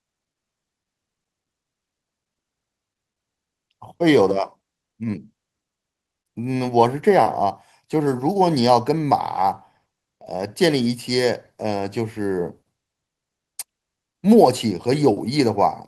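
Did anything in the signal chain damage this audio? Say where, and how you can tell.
No, nothing in the signal chain audibly damaged this speech recording. Listening at every stage from capture to playback turns up no disturbance that would point to a failing link.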